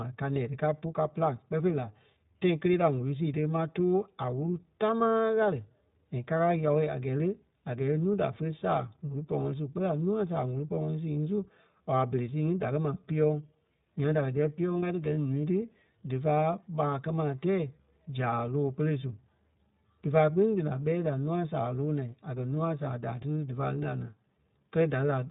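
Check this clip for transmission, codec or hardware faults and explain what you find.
One fault runs through the whole recording: iLBC codec damage, plainly audible from start to finish. iLBC is a narrowband codec that encodes each 20 ms frame's excitation independently, and the roughness here fits its 15.2 kbps mode. The speech sounds thin, slightly buzzy and synthetic. A spectrogram shows nothing above about 3.8 kHz, with a sharp ceiling and a smeared, grainy texture within harmonics.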